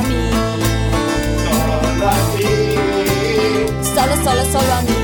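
There's a single sharp snap sitting on top of the audio at 2.39 s, peaking fairly hot at around -10 dBFS. It's an electrical switching spike, most likely a nearby switch, motor or static discharge arcing briefly and getting picked up by the audio line.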